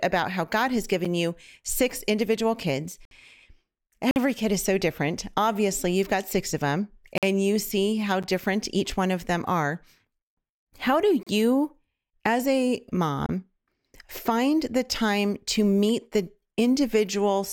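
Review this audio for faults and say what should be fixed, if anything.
Gaps between stream segments occur at 1.05 s, 3.05–3.11 s, 4.11–4.16 s, 7.18–7.23 s, 8.23 s, 11.23–11.27 s and 13.26–13.29 s. Each is a hard-edged silent hole of roughly 8 to 60 ms, falling on the one-second segment grid. The first comes just before "you six individual kids", the second just after it, and the last follows "do you as a". Adjacent segments' timestamps leave a gap the player fills with silence, so nothing is lost, but the speech stutters. Fix this by generating segment timestamps that abut exactly, or by having the player close small timestamp gaps instead of inserting silence.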